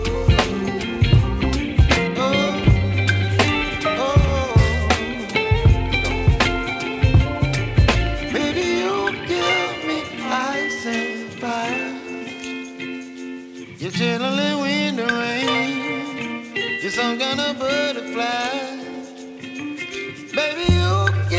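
No technical fault can be heard anywhere in this audio. It arrives through a working call path whose band stops at 8 kHz, which fits a wideband call codec such as G.722 at 64 kbps.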